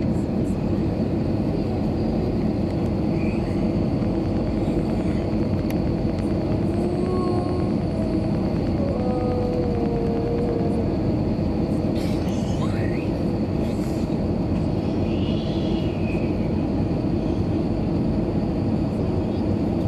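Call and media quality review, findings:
Train of clicks, 4.05–10.61 s: regular ticking at about 9.3 clicks per second, roughly seventy in all, peaks near signal level, audible through pauses too. Likely cause: periodic pulse injection from nearby equipment interference or a faulty connection or power supply.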